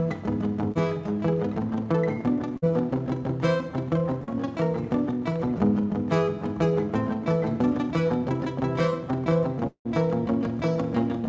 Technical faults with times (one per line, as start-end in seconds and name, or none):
0.72-0.77 short concealed packet loss
2.57-2.72 burst of packet loss
4.24-4.29 short concealed packet loss
9.67-9.87 long network dropout